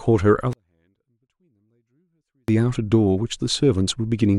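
A speech clip with a 24-bit alignment error (too quiet) from 0.53 s to 2.48 s: the level falls by about 48 dB at once and stays clean but nearly inaudible, then returns at full strength. Samples packed into the low 24 bits of 32-bit words were read as full 32-bit integers, so every value shrank by a factor of 256. On the waveform the trace collapses to a near-flat line with hard edges; a spectrogram shows the same harmonic pattern, only far fainter across that span.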